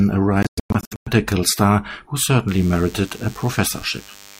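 From 0.43 to 1.08 s, wireless packets most likely failed to reach the headphones in time and were discarded, a Bluetooth dropout. The speech breaks into scattered gaps totalling about 450 ms across 640 ms, the longest near 110 ms, resuming each time as if it had played on.

From 2.48 s to the end, a nearby DECT cordless phone's radio bursts, repeating every 10 ms, are being rectified by the audio circuitry. This DECT buzz comes through as a steady, thin 100 Hz drone rich in harmonics, sitting roughly 25 dB beneath the speech.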